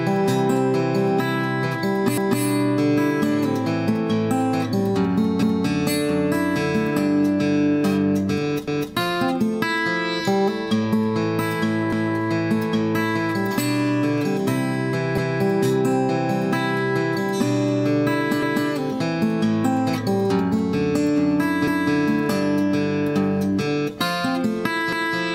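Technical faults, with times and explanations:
2.18, 5.43, 8.68, 11.93, 15.18, 18.43, 21.68 and 24.93 s: overlapping chunks. The audio was handled in 3 s chunks, each starting 250 ms before the previous one ended. That quarter-second plays twice at every join, giving a stutter roughly every 3.25 s.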